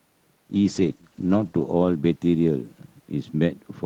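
A call bitrate drop runs from 0.54 to 3.01 s. The link's bandwidth estimate fell, so the encoder coded the speech far more coarsely, which fits a fall from 32 kbps to 13 kbps. For about 1.1 s at its lowest, the speech sounds rough, watery and muffled.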